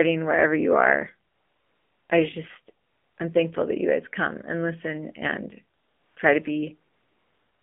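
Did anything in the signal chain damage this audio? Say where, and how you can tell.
Yes, at the codec stage. Throughout, the speech sounds buzzy and synthetic, confined to about 200 Hz to 3.5 kHz. This is the AMR narrowband mobile codec at 7.4 kbps, rebuilding the voice from a vocal-tract model driven by sparse pulses.

In the call processing and codec stage, AMR comfort noise replaces the real background with smooth, steady hiss that switches in and out. It occurs at 1.30–2.10 s, 2.86–3.18 s after "I just", 5.78–6.16 s after "come and listen and", and from 6.92 s to the end after "listen and try to". The sender stopped transmitting speech frames, and the receiver synthesised noise from a coarse level-and-spectrum description.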